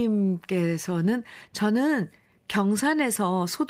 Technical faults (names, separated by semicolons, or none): none